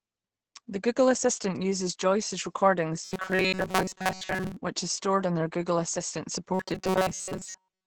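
Speech runs throughout with a muffled, hoarse texture that points to heavy Opus compression in its speech mode, likely near 12 kbps, rather than MP3-style swirling. From 3.05 to 4.57 s and again from 6.54 s to the end, a robotic sound from repeated short buffers sets in: a rigid metallic buzz at 188 Hz, which fits repeats about 5.3 ms long. Most of the audio in those spans is replaced by repeats instead of simply dropping out.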